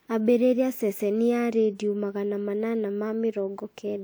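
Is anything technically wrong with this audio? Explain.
No, nothing in this speech recording points to a technical problem with the signal.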